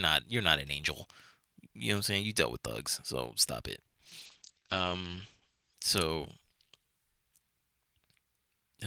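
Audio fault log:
3.87–4.23 s, repeated packet loss (robotic sound): Across this third of a second there are four short holes where the sound drops out, the longest about 70 ms. Each one gets papered over by stretching the last bit of audio, roughly 120 ms of fill in all, with around 80 ms just gone. About a third of the span is patched, and because the gaps come so close together the speech turns choppy.
4.26–5.82 s, call bitrate drop: Right after the choppy bit, the speech goes rough and muffled for about a second and a half. The top end is gone above 8 kHz, where before it reached up to 20 kHz, and the coarser coding gives it a watery, grainy edge. That fits the encoder being squeezed from roughly 32 kbps down to about 10 kbps. It sits at that floor for about 1.44 s before the detail comes back.
4.40–4.64 s, jitter buffer slow-down: Inside that muffled stretch the speech briefly drags, playing at about 86% speed while keeping its pitch. 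The receiver is rebuilding its reserve, repeating tiny pitch cycles and slivers of pause. That adds about 44 ms over roughly a quarter second, so the sounds there come out drawn out.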